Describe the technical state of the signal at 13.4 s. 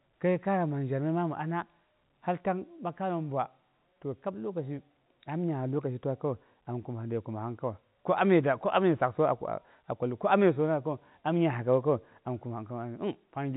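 At 13.4 s the speech is intact, carried on G.711 telephone coding with its band limit at 4 kHz and only a faint quantisation hiss riding under the signal.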